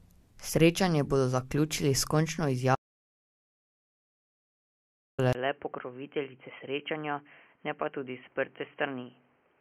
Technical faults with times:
2.75-5.18 audio dropout to silence
5.33-9.61 input switched to a poorer device

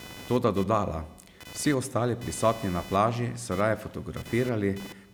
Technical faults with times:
0.00-5.13 computer activity noise

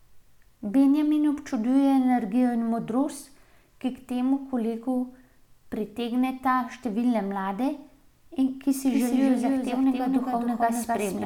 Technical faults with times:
8.87-11.25 doubled audio track

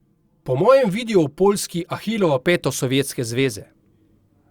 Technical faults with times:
0.00-2.40 channel delay (comb filtering)

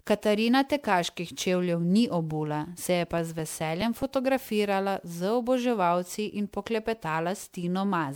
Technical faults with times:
0.00-8.15 generation loss
3.18-4.24 CD scratch ticks

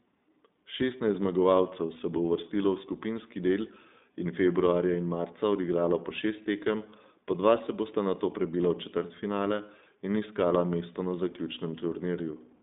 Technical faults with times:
0.00-12.62 iLBC codec
8.58-8.61 lost iLBC frames

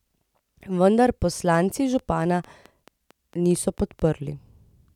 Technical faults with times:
1.54-4.00 train of clicks

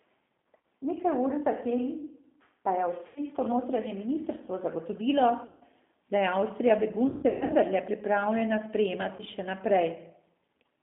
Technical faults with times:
0.00-10.83 G.729 codec
0.61 VoIP packet loss concealed by the speech codec
3.07-3.21 VoIP packet loss concealed by the speech codec
5.46-5.65 VoIP packet loss concealed by the speech codec
7.08-7.54 VoIP packet loss concealed by the speech codec
9.16-9.23 VoIP packet loss concealed by the speech codec

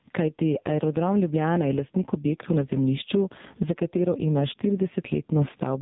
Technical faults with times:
0.00-5.82 gain pumping
0.00-5.82 AMR narrowband mobile codec

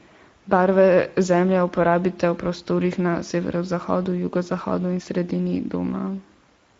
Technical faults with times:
0.00-6.79 Speex codec

